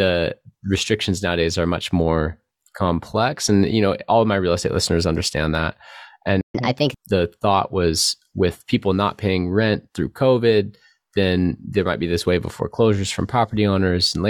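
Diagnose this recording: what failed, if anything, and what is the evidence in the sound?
At the playback stage, a playback stall cuts the speech from 6.41 to 6.55 s, a gap of about 133 ms. The waveform drops to silence and the spectrogram shows a clean vertical blank. The likely cause is the player's buffer running dry or its thread being blocked.

Catch-up at higher speed follows from 6.55 to 7.08 s. The player runs its backlog at 1.25 times normal speed by resampling, raising pitch by roughly four semitones. On a spectrogram the harmonics shift upward and compress in time, then drop back to normal spacing.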